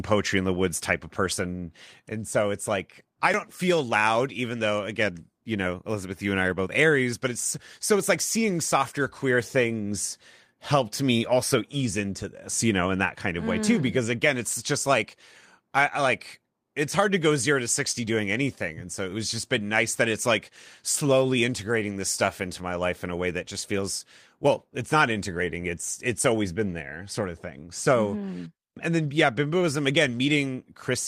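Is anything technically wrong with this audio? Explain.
Yes, there are two faults. At 3.34 s, right after "so it's like i" and before "feel loud even though", there is likely a dropped buffer (overrun): the software failed to read its audio in time and the hardware overwrote it. Roughly 30 ms of speech is gone, and the two sides are spliced directly together with no silence. This is heard as an abrupt forward jump in the speech.

From 9.67 to 9.69 s, just after "like seeing softer queer", one packet was lost and rebuilt from error correction. The following packet carried a low-bitrate backup copy of it, and the decoder played that copy in its place, so nothing drops out. The 20 ms that was filled in this way is audibly rougher and noisier than the speech around it, a brief grainy patch rather than a gap.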